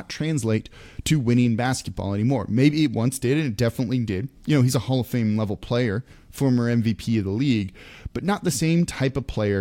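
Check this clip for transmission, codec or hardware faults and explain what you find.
No transmission, codec or hardware faults can be heard in this speech recording.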